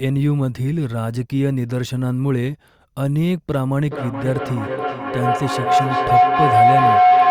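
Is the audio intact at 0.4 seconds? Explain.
Yes, the speech at 0.4 seconds is intact, with no audible dropout, click, distortion or other fault at that moment.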